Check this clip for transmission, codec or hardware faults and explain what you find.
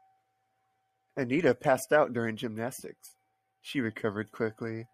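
No fault turns up anywhere in this speech recording. There is nothing here that needs explaining.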